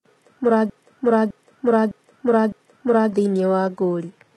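From start to end the speech carries heavy codec damage, likely from HE-AAC compression at a low bitrate, with a sound that fits something near 16 kbps. The treble is synthesised rather than coded: s sounds come out gritty and lispy, and the top end has a metallic sheen whose harmonics don't line up with those below. On a spectrogram the upper band looks copied and smeared, with blocky energy and a hard ceiling at about 11.8 kHz.

From 0.70 s to 3.13 s a broken-record loop takes over: a 0.61-second fragment plays four times back to back, identically, and the speech that belonged there is gone. The likely cause is a stalled player, encoder or stream resending its last buffered piece. The waveform shows the same envelope stamped out at exact 0.61-second intervals, and the spectrogram shows a block of identical patterns tiled side by side.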